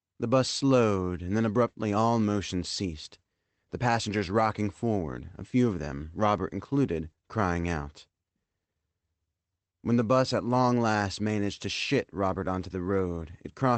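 Nothing's wrong with this one, just speech that came over a call path working as it normally does, with the high end rolling off around 8 kHz, which fits a wideband call codec, and nothing else worth pointing at.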